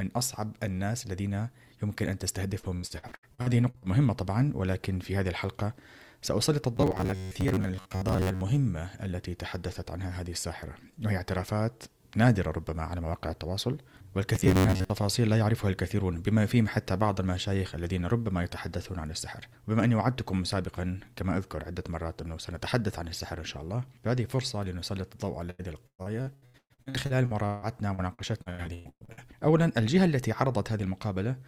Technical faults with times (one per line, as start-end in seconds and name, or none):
2.59-3.85 repeated packet loss (robotic sound)
6.77-8.43 robotic sound from repeated short buffers
14.35-14.91 robotic sound from repeated short buffers
25.50-29.20 repeated packet loss (robotic sound)